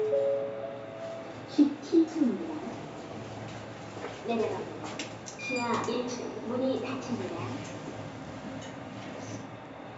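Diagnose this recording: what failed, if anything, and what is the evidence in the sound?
Nothing stood out on listening; no stage of the chain gives itself away with any audible failure in this recording of everyday sounds.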